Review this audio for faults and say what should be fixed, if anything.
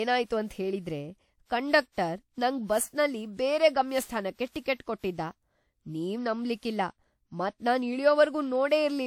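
The speech sounds swirly and hollow throughout, with smeared onsets and nothing above 18.5 kHz. This is generation loss, likely from about seven WMA re-encodes near 96 kbit/s. Each pass re-quantises on a new frame grid, so damage accumulates. Encode once from a lossless master.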